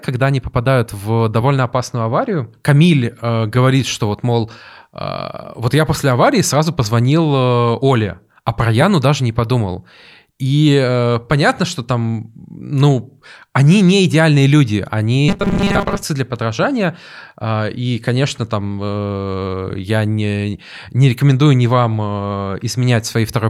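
Speech with robotic sound from repeated short buffers between 15.29 and 16.04 s. The voice becomes a rigid, metallic buzz fixed at 200 Hz. Most of that stretch is repeated audio. The likely cause is late audio being covered by looping a 5 ms slice.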